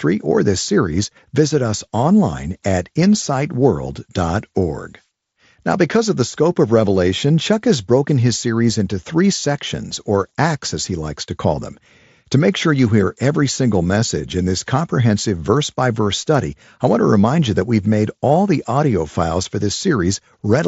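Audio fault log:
No faults heard.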